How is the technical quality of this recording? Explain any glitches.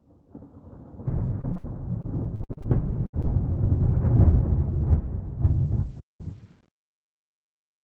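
The technical quality is poor: the sound breaks up repeatedly through the first half and degrades again during the closing fade-out, all over a call path whose Opus coding points to about 20 kbps.

At 1.41 s, 1.53 s and 3.22 s, brief smears or wobbles appear: short concealed packet loss, where the receiver extended the preceding sound across roughly 20 ms holes.

At 1.57 to 1.66 s and 3.06 to 3.15 s, a held buzz or fading hiss replaces the audio: a burst of packet loss, about 60 to 80 ms lost and patched.

From 2.02 to 2.66 s the sound turns choppy: repeated packet loss, with seven gaps of up to 53 ms, about a third of the stretch concealed.

From 5.47 s to the end the fade grows gritty, worst after 6.24 s: truncation distortion on a fade, with the level held to about 9 bits and no dither.

At 5.99 s the sound cuts out for about 190 ms, a playback stall, likely the player running short of data or being blocked.

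From 6.21 to 6.98 s everything plays 1.25 times faster and about four semitones higher: catch-up at higher speed, resampling to recover the lost time.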